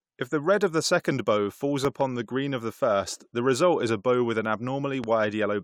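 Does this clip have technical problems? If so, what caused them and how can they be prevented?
Yes: loud pops at 1.85–2.03 s, a double pop after "the second bow falls", and 5.04–5.06 s after "a bow with an", each around 10 dB above the speech, which continues underneath. These are likely voltage spikes from a connector or static discharge. Securing cables and grounding equipment prevents them.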